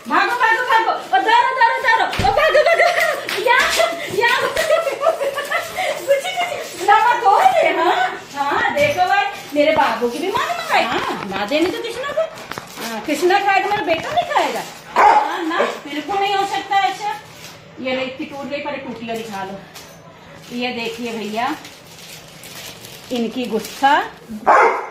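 A stream segment skipped at 14.96 s: the audio jumps abruptly forward, with a brief blip marking the join, and the material that should have followed is simply absent rather than delayed. The likely cause is that one chunk of a segmented stream failed to arrive or load, and the player, instead of stalling to wait for it, moved straight on to the next segment, splicing two non-adjacent moments of the programme together.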